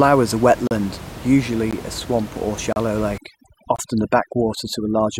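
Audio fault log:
0.67–0.71 s, 1.71 s, 2.73–2.76 s and 3.76–3.79 s: gap between stream segments. The sound drops out abruptly into dead silence for about 36, 16, 35 and 26 ms, with clean hard edges on both sides. The holes recur almost exactly once a second, which fits 1-second stream segments whose time stamps leave a small space between them. The player pads each space with silence, so nothing is missing; the timeline is just stretched slightly at each join.
3.18–5.20 s: overdone noise removal. From this point the room noise, which sat about 15 dB below the speech, gives way to near silence scattered with twinkling specks. A noise reducer set too aggressively is pulling individual frequency bands down hard or shutting them off whenever they approach its noise estimate. That strips out the quieter parts of the speech along with the background, and leaves isolated residual bands flickering on and off.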